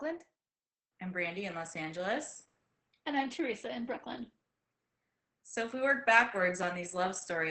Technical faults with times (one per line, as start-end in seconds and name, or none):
0.00-7.50 Opus voice compression